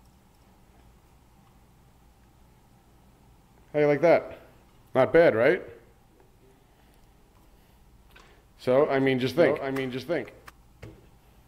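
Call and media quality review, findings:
Doubled audio track, 9.38 to 10.50 s: dry full-band repeat trailing roughly 0.7 s behind, around 5 dB quieter, starting and stopping abruptly. Likely a second, slower capture path mixed in.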